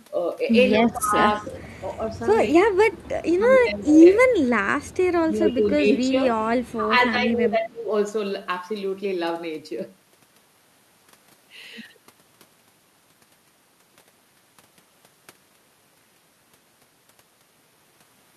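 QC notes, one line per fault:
0.74–1.49 s, 3.12–4.75 s, 5.29–6.21 s and 6.73–7.90 s, speech suppressed in double talk: the speech ducks in pieces by up to about 20 dB in the first two spans and about 15 dB in the later two, with the quieted portions adding up to somewhere between 0.4 s and a second in each span. The cause is likely an echo canceller treating the overlapping far-end talk as echo and pulling the near side down with it.
1.25–1.76 s, 2.92–3.03 s and 6.66–6.72 s, echo leak: a faint delayed copy of the speech trails it by 247 ms, sitting about 20 dB under the speech in the first two spots and about 35 dB under it at 6.66 s. This is likely residual loudspeaker pickup that the canceller failed to remove. Unlike suppression, it adds a repeat of the speech rather than lowering the speech itself.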